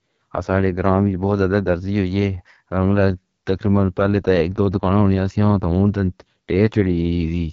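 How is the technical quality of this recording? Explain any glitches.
The recording is noticeably degraded throughout by the AMR wideband (HD Voice) codec. The speech has a rough, raspy texture, and nothing is present above 7 kHz. That cutoff separates it from narrowband phone coding, which would stop near 3.4 kHz. The plainly audible coding damage fits one of the two lowest AMR-WB rates, likely the 8.85 kbit/s mode. At that rate, the pulse-driven model of the vocal tract has too few bits, so the speech up to 6.4 kHz is reproduced coarsely. The 6.4 to 7 kHz band is filled with shaped noise.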